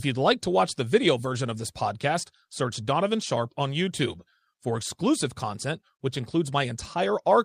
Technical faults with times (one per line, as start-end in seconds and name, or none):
none